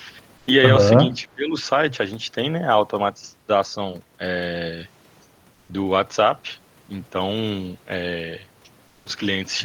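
Discontinuous transmission likely stopped the sender during pauses, and the receiver filled the gaps with synthetic comfort noise in place of the background. From 0.37 to 0.47 s the real background, about 35 dB below the loudest speech, gives way to a steady, featureless hiss about 4 dB quieter. The same swap returns from 5.53 to 5.69 s, where the level barely changes, about 1 dB down, and from 8.87 to 9.05 s, about 5 dB down. The behaviour fits Opus DTX.

From 1.21 to 1.64 s, both ends were talking at once, and the echo canceller likely could not tell the local talker from the loudspeaker echo, so it turned everything down. This is speech suppressed in double talk. The voice sags by as much as about 15 dB and is affected for roughly a third of a second in total within that span.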